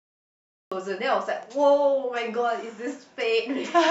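Right at the top there's a cut-off start: digital silence until about 0.72 s, then the speech jumps in mid-sound with no natural attack or fade-in. The capture or stream evidently began late, so the opening of that sound is simply missing.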